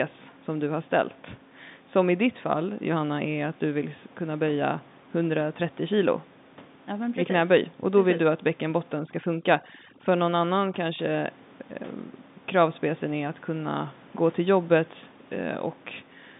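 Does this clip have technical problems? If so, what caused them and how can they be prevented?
Yes. From 8.99 to 10.99 s the background drops and breaks up into twinkling specks. This is overdone noise removal: a noise reducer set too aggressively switches off individual frequency bands near its noise estimate and takes quiet speech detail with them. It can be prevented by using a gentler reduction depth, or by simply leaving the room noise alone, since it sits about 24 dB below the speech.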